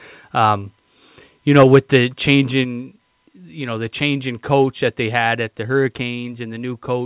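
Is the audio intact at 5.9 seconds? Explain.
Yes, the speech at 5.9 seconds is intact, with no dropout, glitch or distortion there.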